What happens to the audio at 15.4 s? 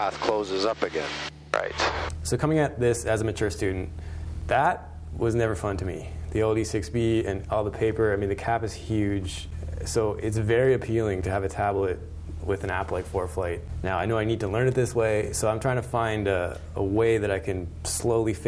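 Nothing goes wrong at 15.4 s; the audio plays through that moment intact.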